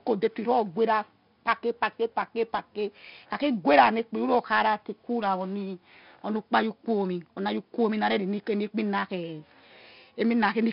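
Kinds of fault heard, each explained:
4-bit ADPCM compression: each sample was stored as a coarse 4-bit step from a prediction, at a rate fitting about 44 kbps. Heavy gritty hiss follows every loud stretch of the speech, sharp onsets distort as the step lags, and nothing is heard above 5.3 kHz.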